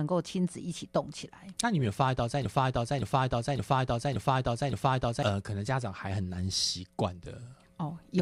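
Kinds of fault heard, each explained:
Broken-record loop: a 0.57 s fragment repeats exactly five times, 2.45 to 5.23 s, likely a stalled stream; unlike echo, nothing new plays beneath.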